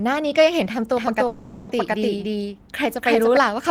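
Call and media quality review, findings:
Doubled audio track, 0.96 to 3.37 s: second full-band copy at roughly equal level, trailing by about 300 ms, dry, abrupt onset and cutoff. Likely a slower secondary capture or mix path reinjecting the same signal out of step.

Call audio freeze, 1.27 to 1.77 s: last sound extended as fading buzz or hiss for 420 ms, no silence, nothing lost. Playback resumes where it stopped, 420 ms late. Likely network-delayed packets draining the jitter buffer, with concealment filling the gap.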